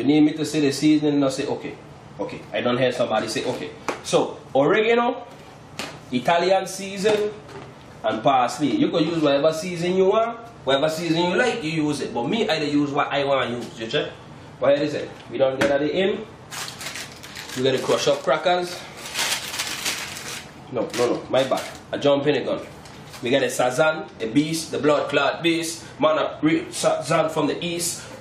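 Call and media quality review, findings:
No audible faults found; nothing to report.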